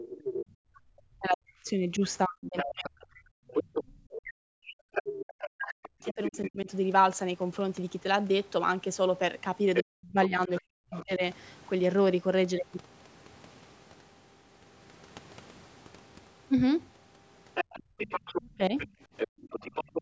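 From 0.0 to 0.08 s a faint second voice sits about 15 dB under the speech, likely the other side's voice leaking through from a loudspeaker the echo canceller did not fully cancel. From 0.08 to 6.69 s comes speech suppressed in double talk, likely the canceller ducking the talker along with the echo. For about 5 s in all, the voice dips by as much as roughly 40 dB or breaks into pieces. Unlike leakage, the problem here is the talker's own voice vanishing, not an extra voice appearing. From 2.57 to 6.5 s the leaked voice returns much louder, only about 5 dB below the speech, and overlaps those dips. The same pairing recurs with leakage from 9.74 to 11.04 s and suppression from 9.82 to 11.22 s, roughly 1 s of the talker chopped away. Leakage appears again from 17.54 s to the end. Within it, from 17.83 to 19.42 s, the background is gated by the echo canceller, with about 35 dB drops totalling some 0.3 s. 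These drops hit the room sound rather than the voice, which separates them from double-talk suppression. A brief suppression of the speech follows from 18.41 to 18.74 s, about 25 dB deep and 0.2 s long.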